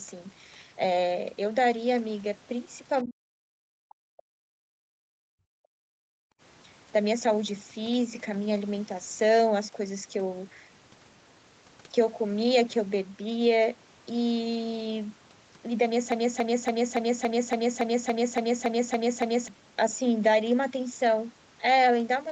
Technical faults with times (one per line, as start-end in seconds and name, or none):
3.03-6.04 speech suppressed in double talk
6.32-6.41 background gated by the echo canceller
16.12-19.48 broken-record loop